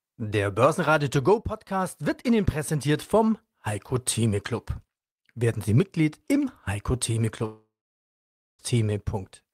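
Speech, cut by a long network dropout from 7.45 to 8.62 s: the last sound smears into a fading buzz, then about 0.89 s of near-silence, a blank spectrogram band and flat waveform, before speech resumes with roughly 1.1 s lost, likely from packets never arriving.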